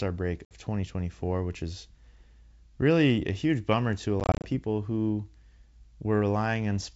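At 0.45 to 0.53 s, packet loss on the ADPCM call cuts about 60 ms into hard silent gaps. Again after "huge bummer to a" (4.20 to 4.48 s), about 140 ms drops in short bursts. The decoder's predictor then briefly mistracks, so the audio resumes slightly distorted.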